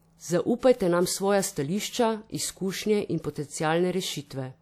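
At 0.59 s, running to 0.63 s, a burst of pre-echo appears in the speech: a short hiss of about 43 ms arrives just ahead of a sharp onset, and the onset itself sounds softened and smeared. The transform codec spread its quantisation noise across the entire block, so noise scaled for the loud attack also filled the quiet stretch before it, where nothing masks it.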